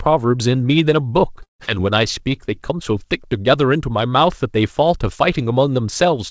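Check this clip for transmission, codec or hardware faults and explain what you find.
Two faults stand out in this speech. One is a gap in the audio, likely a long network dropout. The other is a jitter buffer slow-down right after it.

From 1.43 to 1.70 s the sound breaks off. The last sound carries on as a fading buzz, then gives way to silence. This points to a stretch where no packets arrived. The receiver filled the hole by stretching what it last had, then went quiet. Some speech is simply gone. When the audio resumes, it skips ahead past the lost part. Around the gap the receiver's delay shifted by roughly 70 ms.

From 1.75 to 3.18 s the speech drags. It plays at about 92% speed with no change in pitch, adding about 116 ms in total. Sounds are drawn out, with a faint warble at times. After the gap, the receiver is rebuilding its reserve. It does this by repeating single pitch periods and slivers of pauses over and over. 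The high band is cut at 8 kHz. That fits the G.722 call codec at 64 kbps.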